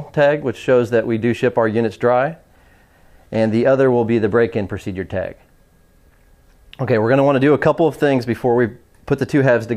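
No technical faults can be heard anywhere in this audio.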